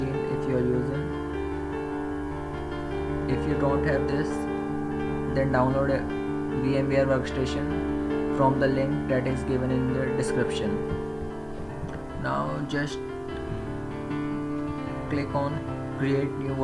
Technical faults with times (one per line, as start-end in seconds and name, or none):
none